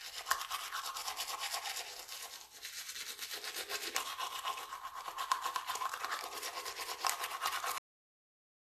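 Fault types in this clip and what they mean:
overlap between stream segments: A tiny skip at 3.03 s and again from 7.01 to 7.03 s, where roughly 20 ms of sound vanishes. Neighbouring 2-second segments carried overlapping time stamps, so the player discarded that stretch as a duplicate, though it was never repeated.
cut-off end: At 7.78 s the sound stops abruptly partway through and falls straight into digital silence with no decay, and that silence runs to the end. The final buffers of audio were never written out or played back, so the ending is simply missing.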